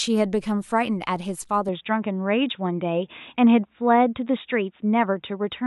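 Input likely switched to a poorer device at 1.69 s in this speech, lasting to the end. With no gap, the sound turns dull and narrow, carrying nothing above 3.8 kHz.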